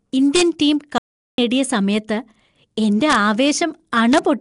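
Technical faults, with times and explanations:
Throughout, Nellymoser compression: The speech carries a rough, hissy halo and a smeared, underwater quality, with plainly audible codec damage and nothing above 10.6 kHz. This is likely the Nellymoser Asao codec, which spends a fixed, small bit budget on short blocks, so weaker frequency bands get no bits and are filled with noise instead of real detail. The density of the damage fits a rate of around 44 kbps.
0.36–0.42 s, 3.11–3.15 s and 4.13–4.18 s, integer overflow: Three violent cracks land on loud moments, far harsher than ordinary clipping. The signal was pushed about 1 to 2 dB past the largest value the integer format can hold. Instead of being held at the limit, each peak wrapped around to the opposite sign, so the waveform jumps across the full range. Those sudden jumps are heard as sharp snaps.
0.98–1.38 s, audio dropout to silence: The speech cuts out abruptly and returns about 0.4 s later. 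The gap is silent with no room tone at all, and whatever was said in it is lost. The likely cause is that the input was briefly lost, for example through a failed link or a momentary disconnection, while the recorder kept writing silence. Real pauses keep some background noise, so this gap sounds dead.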